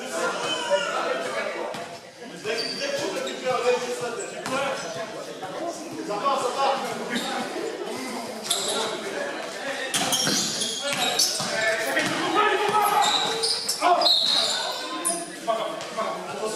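No dropouts, clicks, distortion, or timing breaks are audible anywhere in the clip.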